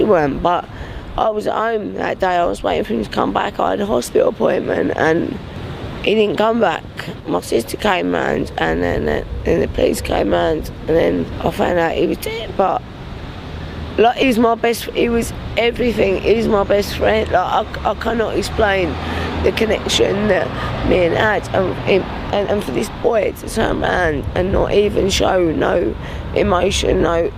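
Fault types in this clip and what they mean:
Compressed frames skipped: whole frames of the encoded stream never reach the output, so the sound jumps ahead rather than pausing. At 14.22 s it skips roughly 30 ms, and at 24.24 s roughly 70 ms. Both fit losing about one and about two 32 ms frames. On a spectrogram this shows as an abrupt sideways shift in the pattern. The waveform shows a discontinuity in the envelope.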